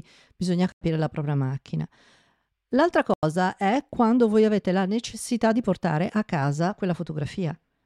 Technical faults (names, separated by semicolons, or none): corrupt frame muted